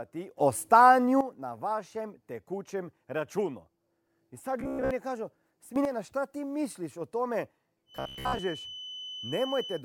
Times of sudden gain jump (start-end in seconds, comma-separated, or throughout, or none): 0.37-1.21, 5.76-5.85